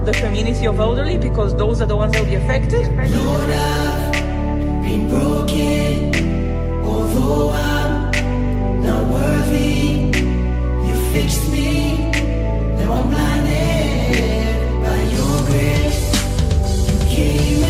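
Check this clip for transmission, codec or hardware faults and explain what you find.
No transmission, codec or hardware fault can be heard anywhere in the clip; the signal stays continuous and stable throughout.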